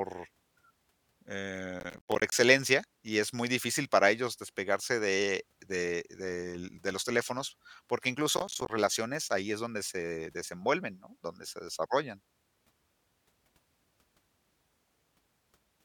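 Processor overload crackle appears from 1.8 to 2.32 s and again from 8.37 to 8.70 s, just after "de los teléfonos porque" and before "relaciones ahí es donde". The processor repeatedly failed to deliver its small audio buffers on time, and each missed one dropped out as a hard-edged gap of silence. The gaps, which fit buffers of about 10 ms, pile up into a gritty tearing crackle over the speech that clears once the load eases.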